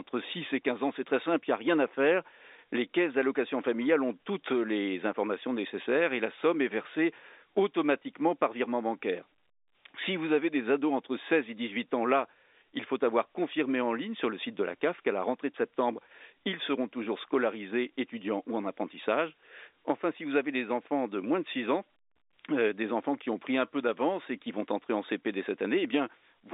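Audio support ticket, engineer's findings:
No faults found; telephone-band speech, G.711 path normal.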